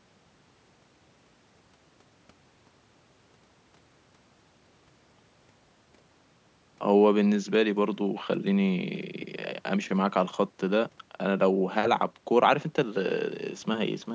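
Listening to this speech recording, nothing stood out as a technical problem, and the narrow, call-style sound of the microphone processing is normal for that path.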